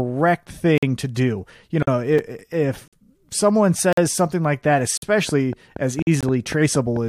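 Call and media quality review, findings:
Gap between chunks: silent holes of about 48 ms at 0.78, 1.83, 2.88, 3.93 s (just before "something like that"), 4.97 s (just after "something like that") and 6.02 s. One per 1 s chunk. Packetiser or player inserting silence at each chunk join. No audio lost.

Gap between stream segments: short silences at 2.18 s (about 4.5 ms) and 6.21 to 6.23 s (about 22 ms). Segment timestamps on a 4 s cadence leave a gap, and the player pads it with silence. Hard edges. No content dropped.

Train of clicks: regular ticking at about 4.4 clicks/s from 5.29 s, after "something like that", through to the end at 7.09 s, audible in pauses too. Peaks roughly 5 dB above the signal. Same-shaped pulses, likely interference or a faulty connection or power supply.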